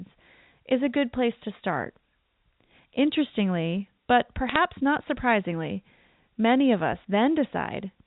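At about 4.49 to 4.58 s you get a short burst of crackle, which is bit errors on a digital phone line. A handful of flipped bits, a fraction of a percent, each change one sample, ticking over the speech while the band-limited G.711 sound carries on underneath.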